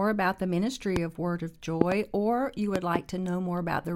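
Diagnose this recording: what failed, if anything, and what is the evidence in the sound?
Sharp, loud pops cut through the speech: a single pop at 0.96 to 0.99 s, then double pops at 1.81 to 1.94 s and 2.76 to 2.98 s, each far above the speech, which continues underneath. These are likely voltage spikes in the analogue wiring, such as a faulty connection or static.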